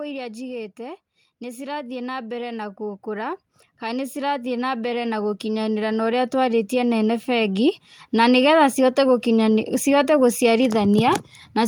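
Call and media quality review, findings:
Automatic gain rising, 0.76–8.4 s: AGC judged input too quiet, ramped gain up about 16 dB gradually; speech and background noise swell together.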